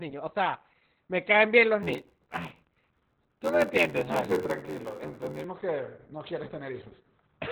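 Opus voice compression runs through the whole clip. The speech has been squeezed through a narrowband linear-prediction coder, which fits a rate around 8 kbps. Nothing remains above about 4 kHz, and the coarse excitation coding leaves the speech muffled, hoarse and faintly robotic.

A block size mismatch (padded) starts at 1.82 s, after "me caen bien los", and lasts until 5.45 s, just before "que no quieres tener". Each block arrives short and is padded with silence. This cuts a tiny gap into every block and lays an 86 Hz buzz over the speech. The speech also slows to 0.861 times its normal speed while keeping its timbre, which fits a 512-sample read buffer.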